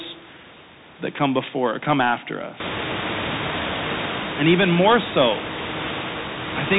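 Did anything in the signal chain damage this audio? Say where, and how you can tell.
Yes, at the codec stage. The Bluetooth CVSD headset codec colours the whole clip. Nothing passes above 4 kHz. S sounds turn scratchy, and granular hiss sits under the speech. Its one-bit adaptive steps lag loud high sounds, which fits a 64 kbit/s CVSD link.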